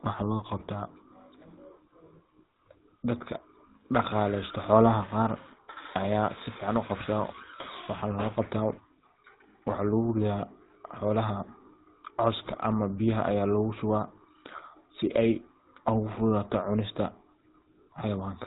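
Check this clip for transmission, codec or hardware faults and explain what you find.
Two codec faults here, one running the whole way through and one short burst.

From start to finish the speech has that buzzy, gravelly GSM full-rate codec sound, and nothing comes through above 4 kHz. The codec models the vocal tract and excites it with sparse regular pulses, which suits the 13 kbps full-rate coder. The damage is plainly audible.

From 12.46 to 12.59 s there are GSM bit errors. Corrupted bits reached the decoder and scrambled its filter, pitch and gain values, so the speech breaks into a squawky, gargling burst for about 0.13 s, which fits roughly six damaged frames in a row.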